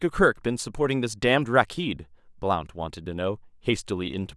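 No technical faults can be heard in this recording.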